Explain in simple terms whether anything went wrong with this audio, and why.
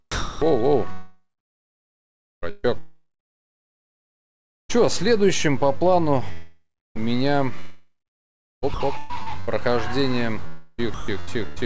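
A few things went wrong here. The whole waveform carries a DC offset, a constant shift away from zero you won't hear but that eats some headroom.

The sound gets chopped by the voice detector across almost the whole clip, from 0.12 to 11.58 s, with about 4.3 s swapped for comfort noise. It's likely the sender's detector flipping on and off, so the sound turns choppy. It happens again from 7.60 to 8.80 s, where about 1.1 s is replaced, and from 10.47 to 11.08 s, where about 0.45 s is replaced.

There's a long network dropout from 6.32 to 6.97 s. About 0.64 s of audio likely never arrived. The receiver stretched the last sound into a fading buzz, left roughly 0.3 s of silence, then picked up again further on.

The call codec path itself just trims everything above 8 kHz, as expected.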